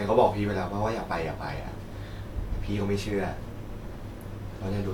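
No technical faults can be heard anywhere in the speech. There is nothing here that needs a fault description.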